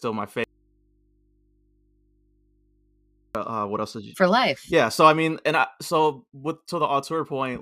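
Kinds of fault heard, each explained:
Audio dropout to a faint residue: speech cuts out abruptly from 0.44 to 3.35 s, leaving only mains hum about 40 dB down, likely from a still-live input after the source was lost. Unlike a pause or fade, both edges are instant and the gap isn't silent.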